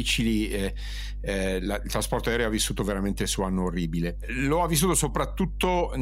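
Mains hum runs through the entire speech clip: a steady 50 Hz tone, with low harmonics, from power-line coupling such as a ground loop. It sits loud, nearly level with the voice. On a spectrogram it shows as unbroken horizontal lines at 50 Hz and its multiples.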